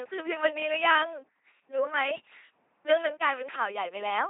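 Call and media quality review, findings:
Buzzy, mechanical robotic speech throughout, hissy where voicing misjudged; no content above 3.8 kHz. LPC-10 vocoder, consistent with a 2.4 kbit/s stream: short-term all-pole filter excited by pulses or noise, each frame forced fully voiced or unvoiced.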